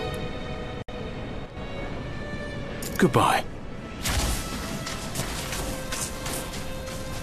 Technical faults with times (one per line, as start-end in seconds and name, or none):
0.82-0.88 gap at a join of encoded pieces
1.46-1.57 sudden gain jump